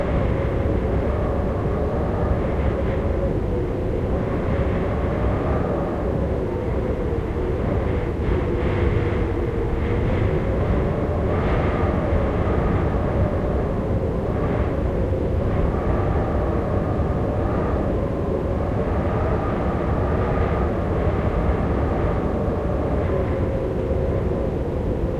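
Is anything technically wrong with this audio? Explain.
No, nothing technically wrong turns up anywhere in this recording of sounds.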